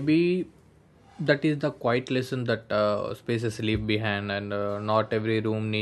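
No technical faults can be heard anywhere in the recording; the signal holds steady and intact for its whole duration.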